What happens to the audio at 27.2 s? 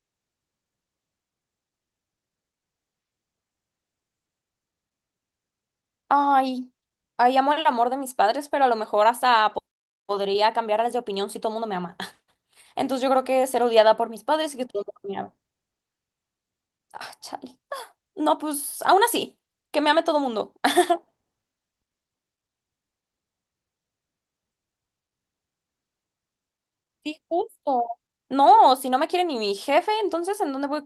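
Nothing goes wrong at 27.2 s; the speech there plays through intact, with no dropout, click, distortion or glitch at that point.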